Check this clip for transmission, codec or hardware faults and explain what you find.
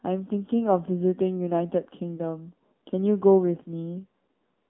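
Two faults are audible: narrowband mobile coding throughout and one brief dropout.

Throughout, the speech sounds boxed-in and buzzy, confined to roughly 200 Hz to 3.6 kHz with plainly synthetic texture. This is the AMR narrowband mobile codec, modelling the vocal tract and driving it with sparse pulses; the plainly audible damage fits a low mode around 7.4 kbps.

At 2.16 to 2.21 s there is a short dip covering about 20 ms of lost audio, consistent with a single lost AMR speech frame. The decoder filled the gap by reusing the previous pitch and vocal tract settings at reduced gain.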